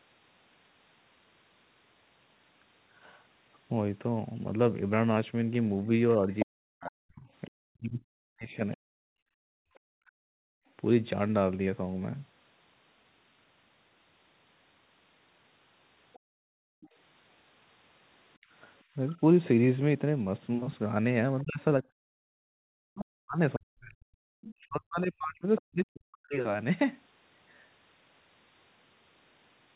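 From 5.86 to 9.18 s, speech is suppressed in double talk. The talker's speech dips by up to roughly 40 dB, in pieces, while another voice speaks. The likely cause is the echo canceller ducking both sides.

From 6.33 to 9.79 s, the other side's voice leaks through, about 10 dB below the speech.

From 9.46 to 10.66 s, the background is gated by the echo canceller. The room sound drops by about 40 dB for about a second, then returns.

From 16.13 to 16.88 s, a faint leak follows, about 30 dB down.

From 16.19 to 18.5 s, the background is gated again, with brief drops totalling under a second.

From 21.4 to 25.61 s, the other side leaks through, about 20 dB below the speech.

From 21.42 to 26.35 s, speech is suppressed in double talk again. It is turned down by up to roughly 40 dB, for about 4 seconds in total.

The audio stops near 4 kHz, which fits narrowband telephone coding.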